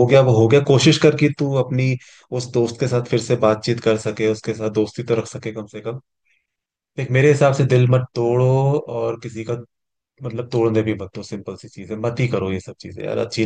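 Nothing in the recording stood out as a technical problem on listening.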